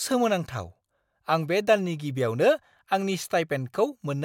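Nothing goes wrong anywhere in this bit of speech, so there's no technical fault to point out.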